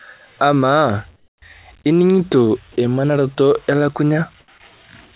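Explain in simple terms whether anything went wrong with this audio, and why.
Comfort noise in place of the background at 1.16–1.42 s, before "ining'ito emanaroto", and 4.4–4.48 s: flat, quieter hiss replaces room sound, likely because the sender stopped transmitting during pauses.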